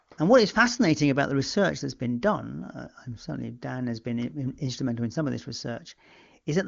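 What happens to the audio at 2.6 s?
Nothing goes wrong at 2.6 s: the speech runs on intact through that moment, with only the ordinary wideband ceiling of the HD Voice coding, nothing above about 7.2 kHz, and no glitch, dropout or added distortion.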